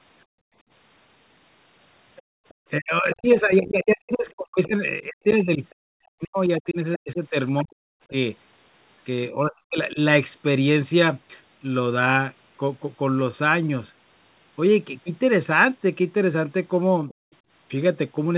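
From 0.26 to 0.64 s the echo canceller clamped the microphone while its loudspeaker was active, producing background gating by the echo canceller: the room tone sinks by about 35 dB for roughly a third of a second, then returns.

Between 2.16 and 2.54 s the canceller likely left residual loudspeaker signal, so the other side's voice leaks through faintly, around 30 dB below the talker. Inside that span, from 2.22 to 2.45 s, the background is gated again, dropping about 36 dB.

From 2.79 to 8.14 s both ends likely talked at once, and the canceller, unable to separate the talker from the echo, turned everything down. This is speech suppressed in double talk: the voice repeatedly dips, at worst by around 40 dB, for about three seconds in total. Within it, the other side's voice leaks through from 3.13 to 3.58 s at roughly 25 dB down, and more plainly from 5.3 to 5.74 s at roughly 15 dB down.

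The same double-talk suppression returns from 9.3 to 9.98 s, with about half a second of deep dips near 40 dB. A brief, shallow dip of around 10 dB follows at 17.02 to 17.11 s.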